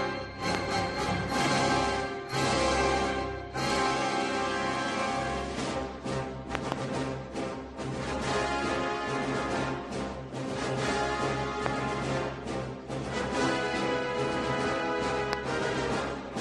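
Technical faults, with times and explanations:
0.55–0.57 s, 6.55–6.74 s, 11.66–11.68 s, 15.33–15.35 s: loud pop. Each event is a sharp, brief transient standing around 20 dB above the surrounding sound. The one at 6.55–6.74 s is a pair of pops in quick succession. The sound continues unbroken beneath each pop. The likely cause is a sudden voltage step or pulse from a plug, switch, static discharge or driver glitch. The downstream circuitry shapes that pulse into the short thump heard.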